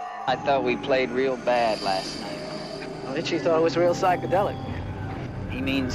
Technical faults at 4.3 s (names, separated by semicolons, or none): sample clock jitter